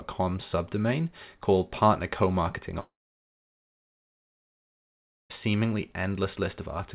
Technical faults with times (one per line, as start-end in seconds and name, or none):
2.80-5.32 long network dropout